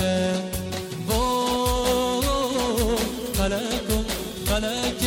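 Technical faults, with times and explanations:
No technical faults can be heard anywhere in the clip. There is nothing here that calls for a timed entry.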